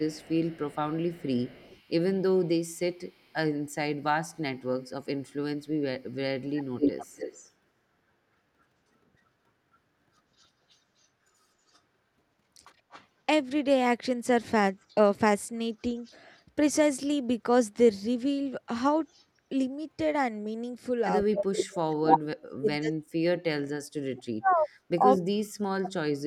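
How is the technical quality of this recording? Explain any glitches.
The recording has clear faults: echo from the far end leaks back in two stretches, and the talker's voice is pushed down when both sides speak at once.

Echo leak: A loudspeaker-side echo canceller likely failed to remove what its microphone picked up. From 0.0 to 3.34 s a faint delayed copy trails the speech by 139 ms, about 30 dB down. From 6.43 to 24.56 s the echo arrives 237 ms late at only about 5 dB below the speech.

Speech suppressed in double talk: When both sides talked, the echo canceller likely could not tell its own talker from the echo and turned everything down. At 1.66 to 1.72 s the voice briefly dips by about 10 dB. From 21.26 s to the end it drops by as much as about 40 dB, affecting roughly four seconds in total.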